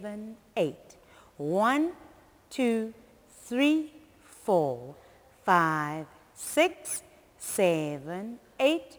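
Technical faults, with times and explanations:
Throughout, crude rate conversion: samples are simply dropped to the nearest neighbour, with no filtering. The pattern points to a 48 kHz to 44.1 kHz conversion. The repeating skip error produces inharmonic tones sitting roughly 25 dB below the sound, heard as a gritty fizz that rises with loud, bright passages. A spectrogram shows faint mirrored partials unrelated to the real harmonics, and the zoomed waveform shows small periodic jumps where samples vanish.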